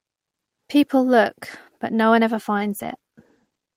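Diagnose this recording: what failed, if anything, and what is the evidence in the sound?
Speech turns rough and muffled from 2.58 s to the end: a call bitrate drop at the codec stage, the encoder falling from 32 kbps to 14 kbps, coding coarsely and losing high frequencies.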